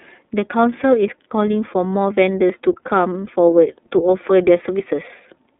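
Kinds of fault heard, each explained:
iLBC codec: The speech passes through a narrowband VoIP codec that codes each 30 ms frame on its own. The line runs from about 250 Hz to 3.6 kHz, with nothing above 3.7 kHz, and the codec damage is plainly audible as a rough, slightly synthetic edge, which fits iLBC's 13.33 kbps mode. Unlike a plain low-pass filter, it adds frame-rate graininess and not just a duller sound.
dropped buffer (overrun): At 4.8 s there is a small forward jump in the speech, as if roughly 20 ms has gone missing and the two sides were butted together with no gap. The likely cause is a capture buffer that was overwritten before the program read it. A network dropout would tend to leave silence or a concealment smear, but this join is an abrupt splice.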